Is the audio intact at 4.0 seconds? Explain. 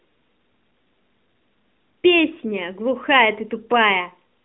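Yes, the audio is intact at 4.0 seconds, with no fault at that moment.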